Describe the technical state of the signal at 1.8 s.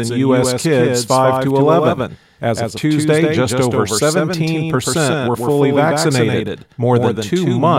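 At 1.8 s the speech carries a doubled audio track running throughout: a second, somewhat quieter full-band copy trails by roughly 150 ms, likely from a slower duplicate capture path.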